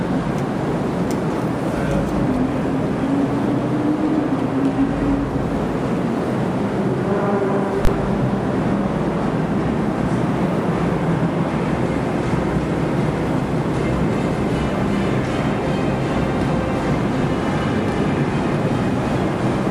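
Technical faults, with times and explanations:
7.85 to 7.87 s, invalid numbers at full scale: a calculation produced infinite or invalid values, pinned at maximum level for about 21 ms, which fits a 1024-sample block, heard as one sharp bang.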